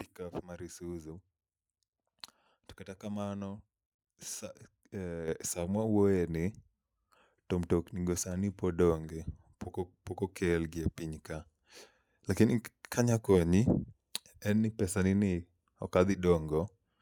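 At 5.28 s the microphone volume steps up. The call software judged the input too quiet and raised the device's input gain in one jump, about 8 dB. Speech and background get louder together, right before "samwa wuoye ni".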